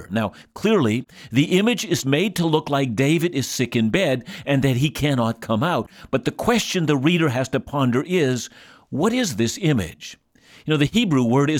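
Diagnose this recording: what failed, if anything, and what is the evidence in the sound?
Unsynchronised converter clocks, likely about 500 ppm apart, cause clock slip clicks: single-sample slips roughly every 40 ms tick steadily through the speech from 0.13 to 11.57 s.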